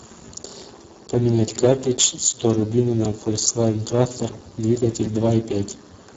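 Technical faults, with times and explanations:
Throughout: Speex codec. Heavy coding damage leaves the speech hoarse, noisy and edging toward robotic, which fits a very low setting near 5.8 kbps. On a spectrogram, harmonics smear into grainy noise, the upper band is a diffuse fill, and nothing appears above 7.8 kHz.
1.07 to 6.05 s: periodic USB or driver dropouts. About seven short losses, each roughly 2 ms, recur every 1.00 s. The audio is skipped rather than silenced, giving regular ticks. The waveform shows abrupt discontinuities, and the spectrogram shows vertical broadband lines at evenly spaced intervals.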